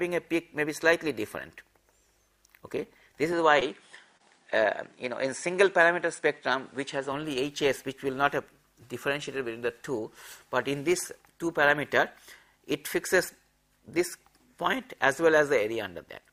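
From 3.33 to 7.12 s the sound loses everything above 10.5 kHz and gains a faint new noise floor, about 40 dB down, with no gap or level jump, so the likely cause is an input switched to a poorer device rather than a filter. Inside that stretch, at 3.59 to 3.63 s and 4.17 to 4.22 s, short concealed packet loss leaves brief smears where about 20 ms of missing audio was filled by continuing the preceding sound, unlike a clean dropout's silence.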